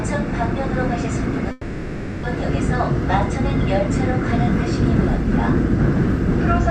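A long network dropout runs from 1.51 to 2.26 s in this sound recording. The last sound is stretched into a fading buzz or hiss that fills about 0.72 s, and the audio resumes without that portion, likely because incoming audio stopped arriving and the receiver concealed the gap.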